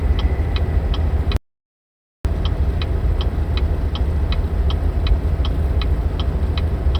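At 1.37 s the sound cuts to total silence until 2.25 s, an audio dropout to silence of about 0.88 s, likely from a lost input.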